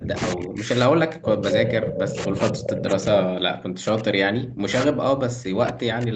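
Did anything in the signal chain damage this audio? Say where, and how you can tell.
Yes. From 0.0 s to 6.16 s the speech keeps dipping, thinning and dropping out in pieces, with the deepest cuts around 40 dB down. The stage is call processing, and the likely cause is speech suppressed in double talk. The echo canceller could not tell the near talker from loudspeaker echo while both sides spoke, so its suppressor attenuated everything. The 8 kHz band limit from the Opus call path is separate from this fault.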